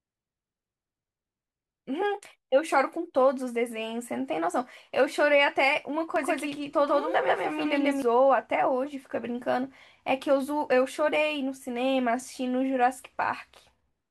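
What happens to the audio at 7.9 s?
At 7.9 s the speech is inside a doubled audio track running from 6.16 to 8.02 s: a second, full-band copy at about the same level trails by roughly 150 ms, dry and abruptly switched, most likely from a slower second capture path.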